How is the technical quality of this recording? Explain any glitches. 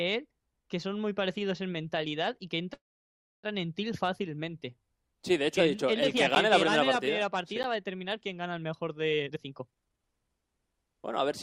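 The recording has three kinds of glitch: a call audio freeze, two blocks of digital silence, and a jitter buffer speed-up near the end.

From 2.73 to 3.45 s there is a call audio freeze, likely caused by packets held up in transit that left the jitter buffer empty. The receiver stretched the last sound into a brief fading tail and then about 650 ms of silence. When playback resumed it continued from where it stopped, adding roughly 700 ms of delay without dropping anything.

At 6.35 s and again at 7.63 s there is a block of digital silence. In each case about 10 ms of output came out as zeros. The sound cuts straight to nothing and back with no fade, so each one is heard as a short tick or click.

From 9.20 s to the end there is a jitter buffer speed-up. The buffer had built up more audio than its target, so the receiver repeatedly removed pitch-period-sized pieces to reduce the delay. 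The sound plays at about 130% speed with its pitch unchanged and comes across as hurried.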